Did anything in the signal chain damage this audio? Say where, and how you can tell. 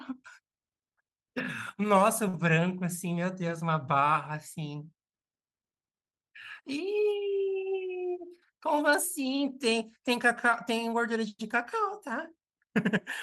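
Yes: a short stall from a late packet at 2.28–2.35 s, in the network stage. The jitter buffer ran dry, so the receiver held the last sound about 54 ms, then resumed with nothing lost.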